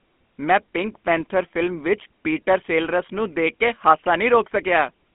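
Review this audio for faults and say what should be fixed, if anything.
The whole clip carries GSM full-rate codec damage, plainly audible from start to finish. The speech sits in a telephone band of roughly 200 Hz to 3.4 kHz, and it has a buzzy, gravelly roughness. That roughness sets it apart from simple band-limiting, which only dulls the sound. It comes from the codec modelling the vocal tract and driving it with a coarse, regularly spaced pulse excitation. The sound fits a 13 kbps GSM full-rate stream. To prevent it, record or route the audio over a wideband path instead of the GSM network.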